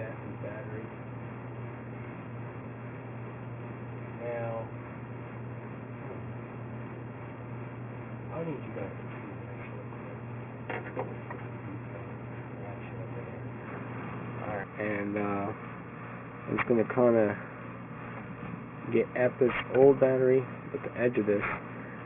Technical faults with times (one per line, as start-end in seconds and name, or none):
0.00-22.05 aliasing